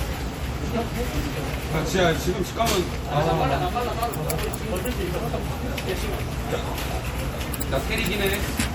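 From start to finish, the audio carries plainly audible MP3 compression damage. The likely cause is an MP3 encode at a low bitrate, and the damage fits something around 64 kbps. With too few bits, the encoder drops weak frequency components and brings them back from frame to frame. That gives a watery, swirling texture. Bright, noisy parts of the sound turn metallic, and sharp onsets lose their edge. The top end still reaches about 21.4 kHz, so the damage sits in the texture rather than in missing treble.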